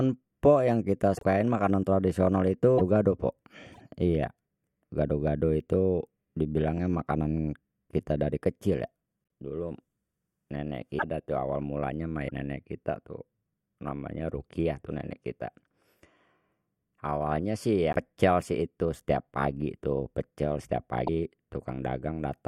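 Short chirps, noise bursts and brief holes break into the speech at 1.17–1.23 s, 2.77–2.81 s, 3.73–3.81 s, 9.23 s, 10.98–11.03 s, 12.28–12.31 s, 17.92–17.95 s and 21.06–21.09 s, each with a jump forward. The likely cause is a broken MP3 bit reservoir. Frames that fit a 24 ms frame length were lost, so the following frames decoded borrowed bits from the wrong data until the stream resynchronised.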